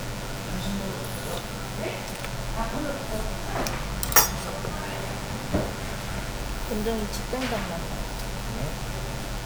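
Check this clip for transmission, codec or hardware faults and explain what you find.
One fault is present: DECT cordless phone buzz, running through the whole clip from start to finish. A nearby DECT handset or base station is transmitting a short radio burst every 10 ms, and the audio circuitry rectifies that energy into the signal path. The result is a steady, thin buzz at 100 Hz with a dense stack of harmonics, sitting roughly 15 dB below the wanted sound.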